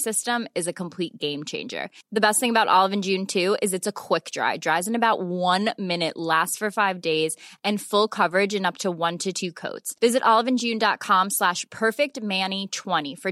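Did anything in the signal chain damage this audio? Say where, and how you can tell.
No, nothing audible in this speech points to damage at any stage of the chain.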